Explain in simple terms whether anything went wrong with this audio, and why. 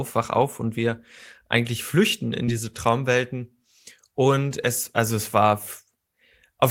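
Short concealed packet loss at 2.45–2.49 s: about 20 ms of the call arrived too late, so the receiver patched it with a brief guessed continuation, heard as a tiny smear.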